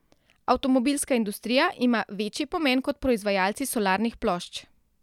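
No technical faults are audible.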